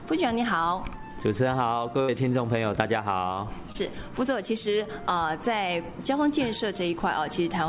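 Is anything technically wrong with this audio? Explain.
Yes. There are two dropouts in transmission. The sound is also band-limited to 4 kHz, which fits a G.711 call path.

From 2.02 to 2.10 s there is a burst of packet loss. Several packets in a row never arrived in time. The receiver extended the last sound for about 60 ms and faded it down. About 60 ms of real audio is gone, so the sound jumps ahead.

From 3.72 to 3.76 s there is a short concealed packet loss. Roughly 20 ms never reached the decoder. The receiver patched the gap for about 25 ms by continuing the preceding sound, then blended back in. It is heard as a brief smear or wobble.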